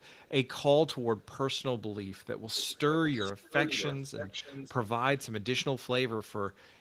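From 0.0 to 0.29 s, a very faint copy of the speech trails 495 ms behind. It returns briefly, even fainter, from 2.17 to 2.26 s. From 2.53 to 2.79 s the lag grows to 587 ms and the copy is louder. From 3.08 to 4.72 s it is strong, a clear delayed double. This is echo leak. The likely cause is a loudspeaker at the far end whose echo canceller did not remove all of the playback its microphone picked up, so it was sent back.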